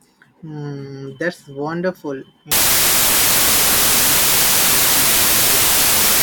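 From 2.52 s, a wrong sample width, fitting 32-bit data read as 24-bit, buries the speech in loud noise, slowed to 0.75 speed.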